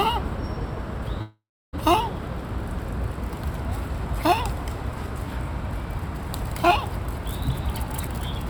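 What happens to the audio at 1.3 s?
At 1.3 s the sound is in the middle of a long network dropout running from about 1.21 to 1.75 s. The last sound before the gap carries on as a fading buzz or hiss for roughly two tenths of a second, then about 0.31 s of silence follows, likely because no audio arrived for over half a second. Unlike a brief packet-loss glitch, the gap is long enough to fall silent, and the sound resumes with that half second missing.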